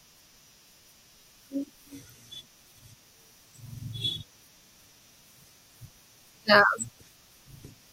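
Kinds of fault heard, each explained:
Damaged data in a compressed stream: brief glitches near 4.27 and 6.96 s, each about 0.06 s, where corrupted frames are misread and the decoder loses sync.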